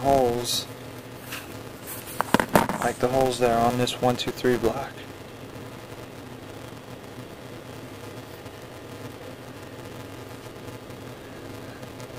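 Throughout the clip, a filter restarted on every block: it discards its internal state at each block boundary and begins processing as if the preceding audio had been silence. Each restart leaves a small transient, and these repeat 375 times per second, which fits a 128-sample block. The result is a steady buzz at 375 Hz that rises and falls with the level of the sound, loudest where the audio is strongest.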